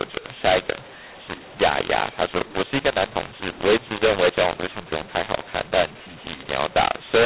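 From the first moment to the end, the speech carries a mu-law and A-law mix-up: samples coded with A-law are being expanded with the mu-law curve, so every level lands on the wrong step. Loud and soft parts come out mismatched, giving a harsh, gritty distortion, and pauses fill with hiss because near-silent codes decode well above zero. Unlike ordinary clipping, the damage reaches the quietest passages too, and it is far coarser than the faint level-following noise of the 4 kHz-limited telephone band.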